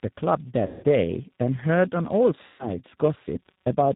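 The whole clip of speech carries a steady buzz at 188 Hz whose strength tracks the level of the talker. This is a filter restarted on every block. The filter discards its memory at each block boundary and starts again from silence, so every block opens with a small transient. Repeating at this rate, those transients fuse into a buzz rather than separate ticks, which fits a 256-sample block at 48 kHz.

Throughout, the speech also has a rough, slightly synthetic quality, with nothing present above 4 kHz, consistent with the G.729 codec at 8 kbit/s. This codec does not keep the waveform. It rebuilds each 10 ms frame from a vocal tract filter, a pitch predictor and a few pulses. The resulting coarseness is plainly audible here.

From 0.66 to 0.85 s, and again from 2.47 to 2.69 s, there is VoIP packet loss concealed by the speech codec. About 170 ms of audio is missing in the first gap and about 120 ms in the second. 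In each gap the decoder carries on from its last pitch and filter settings while lowering the gain, so the sound smears into a buzzy tone or coloured noise that fades. Because each frame is predicted from the one before, the voice stays weak and distorted briefly after each gap before it recovers.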